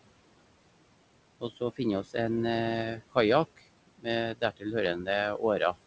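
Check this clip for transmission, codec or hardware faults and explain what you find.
Two related faults come from the noise suppressor. One runs through the whole clip and one hits the speech at four points.

Noise suppressor artifacts are present throughout. The suppressor treats steady room noise as unwanted and pulls it down by about 21 dB between phrases. Under the speech that noise comes back. The leftover background pumps.

Speech cut by the noise suppressor happens at 1.41 to 1.8 s, 2.97 to 3.16 s, 3.87 to 4.07 s and 4.35 to 4.73 s. The suppressor mistakes quiet speech for noise and lowers it with the background. The first drop is about 14 dB and the rest about 20 dB. Short stretches, roughly a tenth of a second each and about twice that in the last, sound swallowed or faint.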